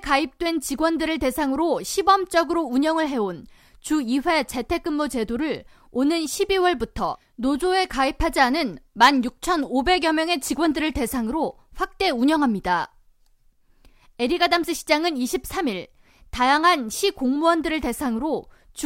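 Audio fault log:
No technical faults are present in the speech recording; the signal holds steady throughout.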